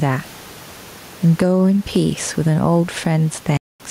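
Right through the speech there's gain pumping: loud and soft parts are pushed closer in level and the sound is squashed, a swing of roughly ten decibels, likely from a fast limiter fighting overly high mic gain. At 3.57 s the audio cuts out until 3.80 s, a 224 ms hole that resumes as though it had kept playing, likely a Bluetooth dropout of about a dozen lost packets.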